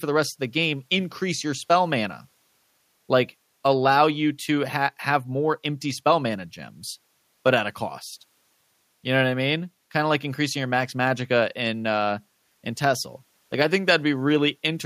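Nothing technically wrong turns up anywhere in this speech recording, so there are no faults to point to.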